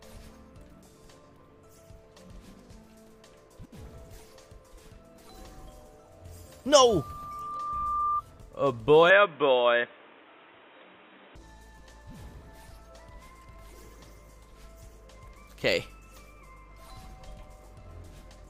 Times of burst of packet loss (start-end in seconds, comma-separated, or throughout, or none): none